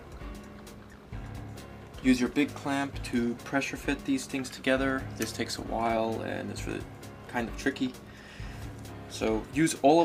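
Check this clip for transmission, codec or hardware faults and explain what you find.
Nothing stood out on listening to the clip that would point to a transmission, codec or hardware problem.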